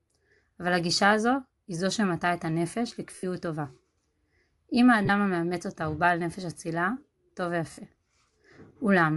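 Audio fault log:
throughout: Bluetooth LC3 compression. The speech has a plainly audible breathy, grainy edge, and the top of the band sounds hissy rather than detailed. The likely cause is LC3 coding in 7.5 ms frames at a rate consistent with 48 kbps, where much of the upper spectrum is dropped and refilled with noise.
3.15–3.23 s, 5.05–5.09 s, 7.71–7.78 s: lost LE Audio frames. Brief noisy smears replace the speech for 75, 37.5 and 60 ms. The decoder covered each gap by reusing the last spectrum with randomised signs, which points to runs of ten, five and eight missing 7.5 ms frames.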